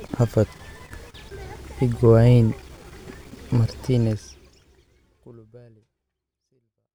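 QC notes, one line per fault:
No faults to note; the speech ends on a smooth fade-out from about 4 s.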